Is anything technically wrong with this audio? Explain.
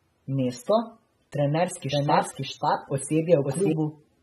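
Yes, there are two faults. Throughout the speech there is plainly audible AAC compression, likely AAC-LC at a bitrate around 27 kbps. The encoder discards everything above 12.6 kHz and quantises the rest coarsely, so the voice sounds dull with a fizzy, warbling texture on sibilants. A simple low-pass filter would only remove the top end without adding that swirling grain.

From 1.92 s to 3.72 s there is a doubled audio track. A second copy of the speech, at about the same level, runs roughly half a second behind the original, likely because a slower path captured the sound again. Unlike an echo or reverb, the copy is full-band, does not decay, and starts and stops abruptly.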